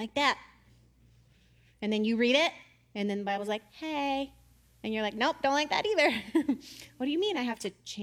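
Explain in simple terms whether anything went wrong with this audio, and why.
At 3.11 s, just after "you read it and", the radio lost its digital signal and went through digital radio blending to analogue, switching over to the same station's FM broadcast in a cross-fade of about half a second. It stayed on FM until 7.70 s, then returned. During that stretch a faint hiss sits under the speech, while the loudness stays the same.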